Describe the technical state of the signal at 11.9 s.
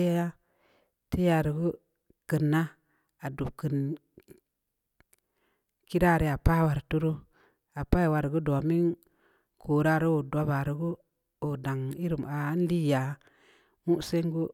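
At 11.9 s the speech signal is intact, with no audible fault at that moment.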